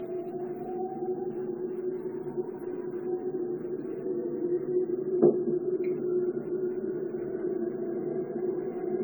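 From start to finish the sound is swirly, hollow and smeared, with blurred attacks despite content reaching 20 kHz. This is generation loss, likely from around fifteen lossy re-encodes resembling AAC-LC near 96 kbit/s, each pass re-quantising and compounding the damage.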